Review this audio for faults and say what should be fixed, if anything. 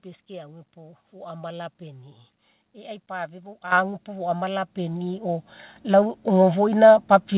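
The microphone volume stepped up three times, at 3.72, 4.74 and 5.76 s. The speech and background jumped together, by about 10, 4 and 6 dB. The call software raised the input gain in steps. The call path cuts everything above 4 kHz, as G.711 mu-law does. To prevent this, disable automatic microphone gain adjustment in the call software.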